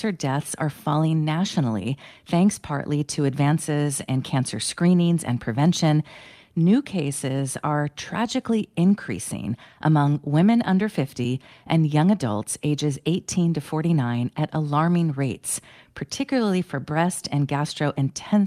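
Nothing in the audio stands out as a technical fault, so there's really nothing to flag here.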